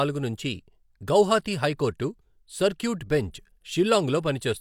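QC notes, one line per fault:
No fault found, so there are no QC notes for this speech clip.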